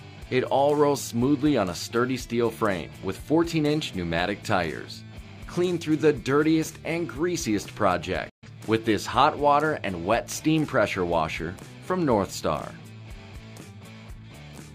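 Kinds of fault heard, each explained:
digital broadcast dropout: The receiver stopped getting valid frames and muted its output until clean data resumed. At 8.29 s the sound fades out within 8 ms, returning at 8.48 s; around 128 ms of programme is simply gone, which fits three lost frames.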